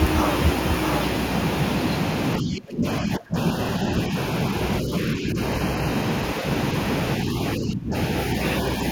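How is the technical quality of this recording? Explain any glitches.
The recording has two problems: a doubled speech track throughout, and several moments where the speech is suppressed during double talk.

Doubled audio track, throughout: a second full-band copy trails roughly 0.7 s behind at about 5 dB lower, likely a slower capture path mixing the speech in twice.

Speech suppressed in double talk, at 2.4–2.85, 3.01–3.36, 4.81–4.92, 5.14–5.38 and 7.57–7.94 s: the speech dips by up to about 25 dB, likely because an echo canceller turned down both talkers at once.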